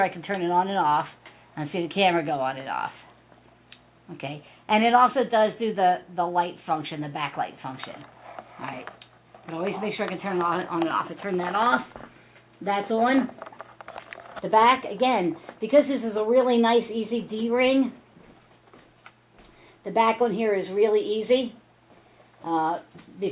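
No technical faults are audible anywhere in the recording.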